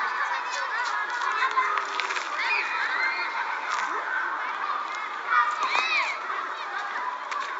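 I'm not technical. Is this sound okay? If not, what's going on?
Yes, this one's fine: nothing in it sounds broken or glitchy, so there's nothing you need to worry about.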